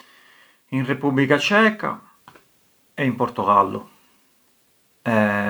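Speech recording with no technical faults detected anywhere in the audio.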